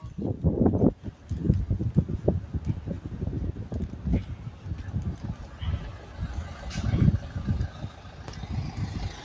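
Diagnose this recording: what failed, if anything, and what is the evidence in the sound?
What's gone wrong is in the call processing: a noise suppressor built for speech is running on these sounds, and it's active for the whole clip. Attacks get through, but anything steady or decaying gets read as noise and pulled down, so the level pumps and flutters by roughly 10 dB and the tails thin out. The band stopping around 8 kHz is just the call's normal microphone chain.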